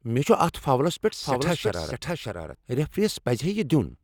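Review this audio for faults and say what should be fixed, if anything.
A second, slower capture path likely fed the signal in twice: from 1.23 to 2.55 s a doubled audio track trails about 0.7 s, about 5 dB quieter.

Route each source through one capture path only and check edits for overlapping duplicate regions before mixing.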